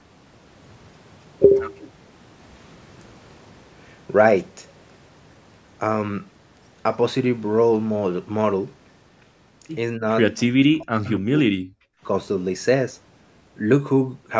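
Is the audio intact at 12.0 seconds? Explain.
No. At 12.0 s the clip is inside a stretch of background gated by the echo canceller, running from 11.82 to 12.02 s, about a fifth of a second. While far-end audio played through the loudspeaker, the canceller clamped down on the microphone path to keep that playback from returning as echo, pulling the room sound down by up to about 40 dB. It is heard as a brief hole in the ambience that refills once the suppression releases.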